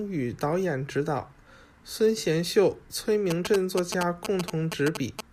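From 3.31 to 5.21 s, a nearby 2G phone's radio bursts are picked up and rectified by the audio circuit, causing GSM signalling bursts. Over the speech comes a galloping dit-dit-dit of short 217 Hz buzzes, only slightly quieter than the voice.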